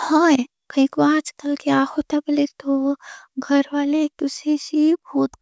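No dropouts, clicks, distortion or other technical faults can be heard anywhere in this speech recording.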